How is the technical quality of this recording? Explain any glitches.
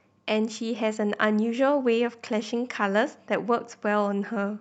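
No glitches to report: the speech arrives over a call path whose codec limits the audio band to about 8 kHz, and nothing else stands out.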